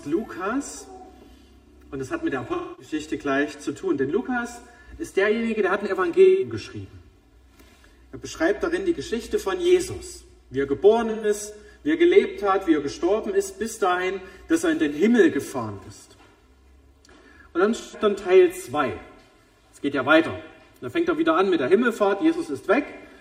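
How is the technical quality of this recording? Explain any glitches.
Two faults stand out. Channel delay (comb filtering) runs throughout. One channel lags about 3 ms, so mono summing cancels evenly spaced frequencies from roughly 150 Hz up. Everything sounds hollow and phasey. AAC frame loss with concealment occurs at 2.53–2.93, 6.24–6.52, 11.10–11.29 and 17.80–18.00 s. The decoder patches missing frames from earlier spectra, leaving brief smeared, noisy gaps.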